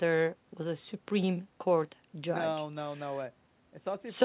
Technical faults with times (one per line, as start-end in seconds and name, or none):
none